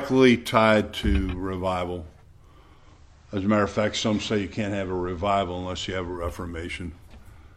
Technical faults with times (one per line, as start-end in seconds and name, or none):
2.73-6.24 digital radio blending to analogue